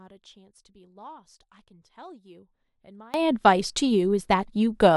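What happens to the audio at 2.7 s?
At 2.7 s the clip is still inside a stretch, from the start to about 3.14 s, where one stereo channel is likely polarity-inverted, a case of one channel inverted. When the two channels are combined to mono, the speech they share cancels almost entirely, dropping the level by about 26 dB. The voice collapses to a faint residue made only of whatever differs between left and right, until normal polarity returns at 3.14 s.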